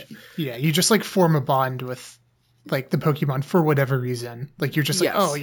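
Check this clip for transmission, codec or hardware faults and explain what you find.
There's one fault, running through the whole clip: imaging from sample-and-hold upsampling. Each sample seems to have been repeated with no smoothing filter, which fits a 16 kHz to 48 kHz conversion. A mirrored copy of the spectrum sits between 8 kHz and 16 kHz, about 16 dB down, heard as a metallic fizz that rises and falls with the speech and moves against its pitch.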